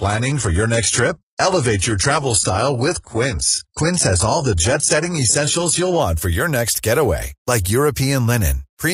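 Until 6.0 s, an adaptive stream starting at a low bitrate leaves speech thin and smeared, with the spectrogram empty above 11.1 kHz, before quality jumps seamlessly at "for your next getaway".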